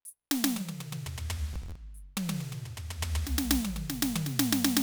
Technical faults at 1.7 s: processor overload crackle

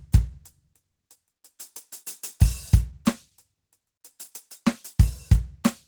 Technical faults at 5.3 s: Opus compression

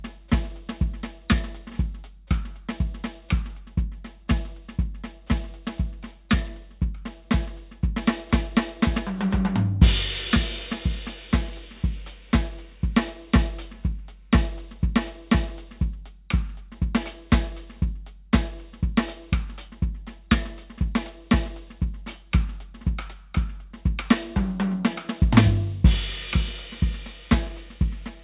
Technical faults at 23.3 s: none

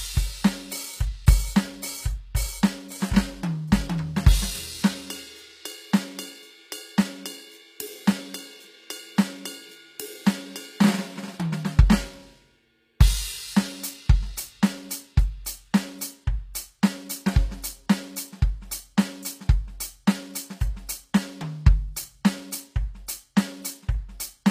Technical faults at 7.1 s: HE-AAC compression

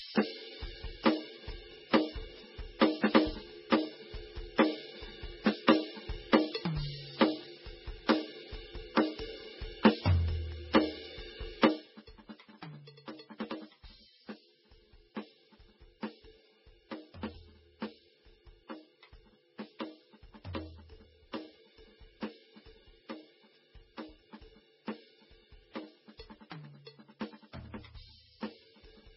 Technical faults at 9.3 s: transcoding between lossy codecs

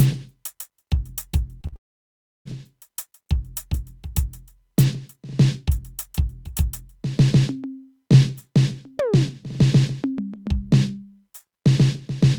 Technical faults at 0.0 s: none

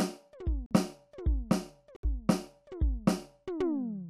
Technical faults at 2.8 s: none

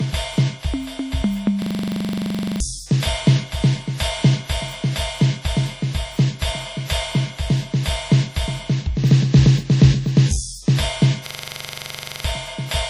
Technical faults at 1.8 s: low-bitrate audio saved at a high bitrate; system hang loop

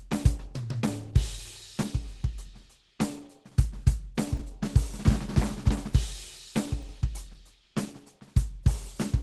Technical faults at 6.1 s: Opus compression

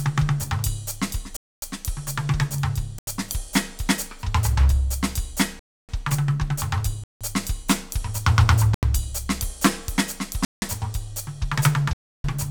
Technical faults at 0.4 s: none

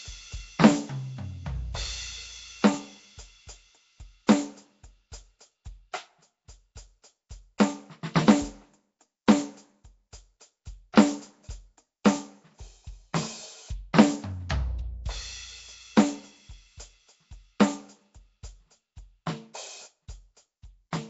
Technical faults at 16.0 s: Nellymoser compression

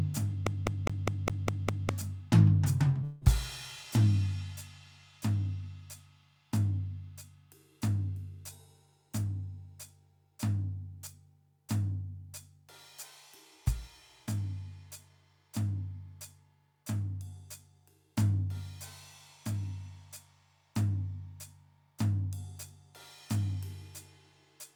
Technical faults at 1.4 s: CD stuck on one turn

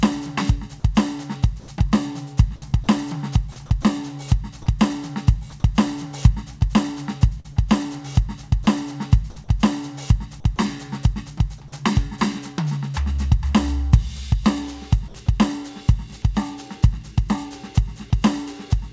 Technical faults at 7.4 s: short concealed packet loss

